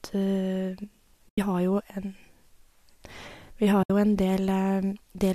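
AAC frame loss with muting cuts two soft-edged holes into this speech recording, from 1.29 to 1.38 s and from 3.83 to 3.90 s, lasting about 90 ms and 70 ms. The decoder zeroed the spectrum of the missing frames, so the overlapping windows fade the sound down into silence and back up rather than snapping off. The lengths fit runs of short frames, likely from a low-delay AAC stream.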